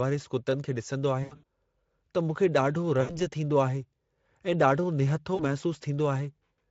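Speech carried over a Speex link, light at around 28 kbps, with VoIP packet loss concealed by the speech codec at 1.23 to 1.44 s, 3.01 to 3.27 s and 5.35 to 5.46 s. Each dropout stretches into a buzzy tone or coloured noise that fades, seen as smeared harmonics and a decaying envelope rather than silence.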